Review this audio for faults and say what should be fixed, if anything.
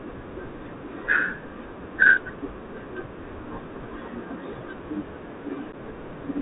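The speech is carried through a Bluetooth CVSD headset codec for its whole length. CVSD sends one bit per sample, stepping the waveform up or down with an adapting step size. Nothing above 4 kHz survives, so the sound is narrow and dull. The damage is plainly audible. S sounds turn scratchy, loud bright moments distort as they outrun the step, and a granular hiss sits underneath. The sound fits a 64 kbps CVSD link. Prevent it by negotiating a wideband codec such as mSBC or LC3, or recording on a wired microphone.

There is unconcealed Bluetooth headset packet loss at two points. At 3.06 s a 3.8 ms hole drops out, roughly one packet's worth. From 5.72 to 5.75 s an 11.2 ms gap opens, sounding like a few lost packets. Silence or an idle pattern fills each hole with no smoothing. The edges are abrupt and can click, and the speech returns briefly quieter as the CVSD step size recovers. Prevent it by reducing radio interference and distance, or enabling packet loss concealment.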